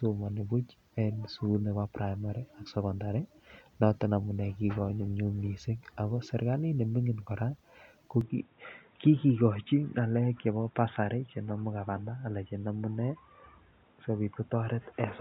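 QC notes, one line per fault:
8.21–15.21 s, input switched to a poorer device: from 8.21 s the speech turns dull and boxy, with nothing above 3.8 kHz and faint new background noise, at the same level and with no gap. This likely means the input moved to a narrower-band microphone. The new noise is what sets it apart from a plain low-pass filter.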